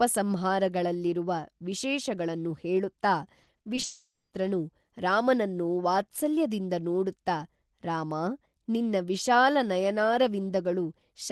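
Just after "ವಿಶೇಷಗಳನ್ನು ಹೇಳುತ್ತಾ", from 3.43 to 3.85 s, repeated packet loss produces choppy, robotic speech: five short gaps, up to 40 ms each, patched by repeating sound, appear as smeared, striped spectrogram slices.

From 3.85 to 4.33 s, the last sound drags into a fading buzz, then about 240 ms of flat silence, likely a long network dropout. The waveform shows a decaying tail and then nothing.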